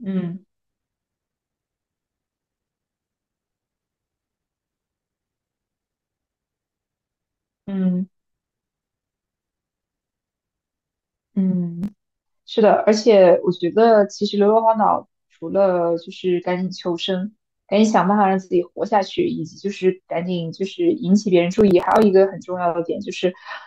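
A gritty crackle tears through the speech from 11.82 to 12.11 s and from 21.53 to 22.03 s. This is processor overload crackle: an overloaded processor misses a run of sub-millisecond buffer deadlines and skips them.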